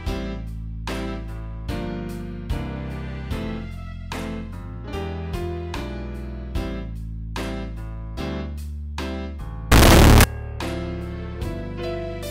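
From 9.72 to 10.24 s the audio turns into very loud, harsh distortion, with quiet moments as loud as everything else. The likely cause is signed and unsigned mixed up in 16-bit samples: a flipped top bit makes every zero crossing leap across the full range, seen as a solid waveform block and broadband smear on a spectrogram.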